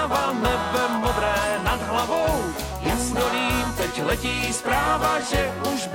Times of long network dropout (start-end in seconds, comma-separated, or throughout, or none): none